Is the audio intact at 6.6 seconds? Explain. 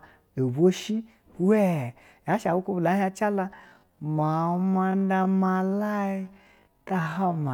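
No. 6.6 s falls inside a time-stretched section from 3.47 s to 7.54 s, where the sound plays at half pace with unchanged pitch, dragging, likely from repeated short segments.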